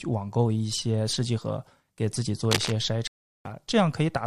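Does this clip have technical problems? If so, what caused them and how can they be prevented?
Yes. From 2.51 to 2.72 s there is cable scratch noise, a dense, uneven rustle about as loud as the speech. It is likely a worn cable or connector being moved, its contact resistance jumping rapidly. Replacing worn cables and securing connectors prevents it.

From 3.07 to 3.47 s a stream reconnect occurs. The audio drops to silence for 377 ms. The player then reconnects and restarts its decoder, resuming about a tenth of a second later in the speech. A steadier network connection or a larger playback buffer prevents it.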